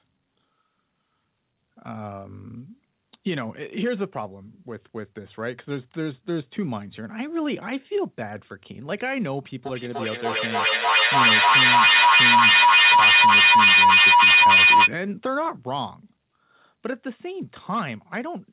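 From 9.65 s to 14.95 s a shrill tone near 3 kHz rises out of the speech, peaking about 12 dB above the talking before it stops. This is feedback howl: two devices in the same room on the same call, so the sound loops from microphone to loudspeaker and back, gaining level each trip. Here the loop's delay is near 300 ms, and it settles on a pitch that the band-limited call path, which keeps nothing above 4 kHz, still passes.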